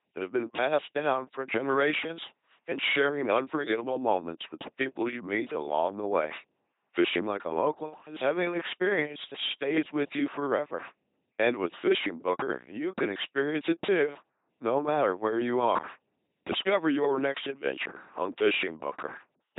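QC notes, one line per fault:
Throughout: LPC-10 vocoder. The speech comes across as a buzzing, mechanical robot voice, heavily degraded, with nothing heard above about 3.8 kHz. Each short stretch is rebuilt from a simple all-pole vocal tract filter excited by either a regular pulse train or noise, never a mix, so breathy and mixed sounds collapse into buzz or hiss wherever the voiced/unvoiced call goes wrong. The band-limited robotic sound fits a 2.4 kbit/s LPC-10 stream.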